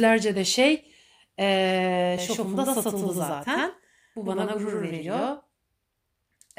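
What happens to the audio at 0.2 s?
At 0.2 s the speech plays through intact, with no audible fault at that moment.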